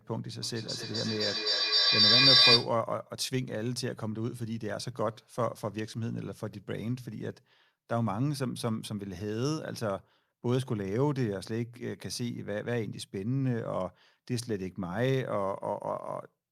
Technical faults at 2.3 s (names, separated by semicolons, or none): feedback echo between two devices